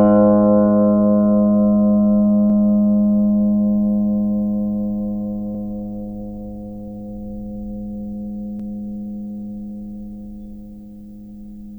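At 2.50–2.55, 5.55–5.60 and 8.60–8.64 s, overlapping chunks replay 48 ms of music every 3 s: a stutter, seen as duplicated waveform and spectrogram seams.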